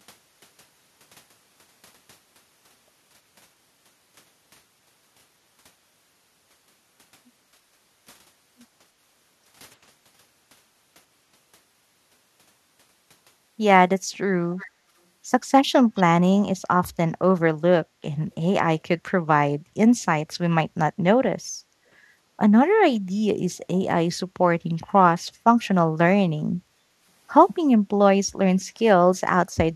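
At 14.57 s and again at 15.95 s, a brief echo leak comes back about 320 ms late, quiet, roughly 20 to 25 dB below the speech. The far end's echo canceller likely let some loudspeaker pickup through. At 26.69 s, the background is gated by the echo canceller. The room sound dips by about 12 dB for roughly a third of a second, then returns.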